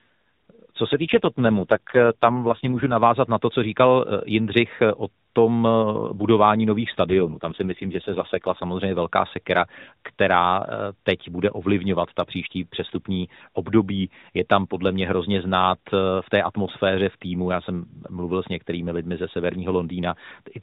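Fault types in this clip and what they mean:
AMR rate drop: twice the speech turns rougher and more synthetic, fitting a switch down to 4.75 kbps; the spectrogram keeps its 4 kHz top, and the waveform shows no gap.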